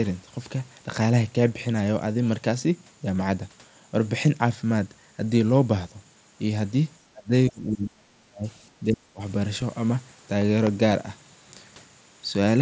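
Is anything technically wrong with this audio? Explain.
Yes, there are two kinds of fault. Speech is suppressed in double talk at 7.12–7.31 s, 7.49–8.47 s and 8.8–9.21 s, where the level dips by up to about 35 dB. The likely cause is an echo canceller turning down this side while the far end also spoke. Unlike a dropout, the level falls and recovers in uneven pieces rather than cutting out cleanly.

At 9.61 s there is a concealed Bluetooth headset packet loss. The gap is very short, consistent with one lost frame of about 7.5 ms. The receiver filled it with a copy of the preceding waveform, so it is nearly hidden, with no silence. An isolated loss like this does not produce the buzzy held tone that a run of losses would, and it sits inside the headset's 8 kHz speech band.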